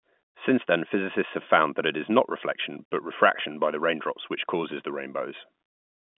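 No technical faults can be heard anywhere in the speech. The sound carries the narrow band of an ordinary G.711 mu-law telephone line, roughly 150 Hz to 3.5 kHz, with the lowest bass already trimmed by the call's microphone processing.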